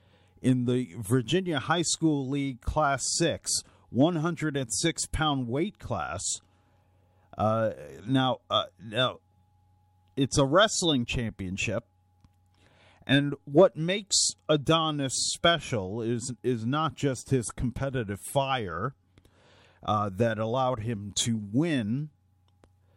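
No technical faults can be heard.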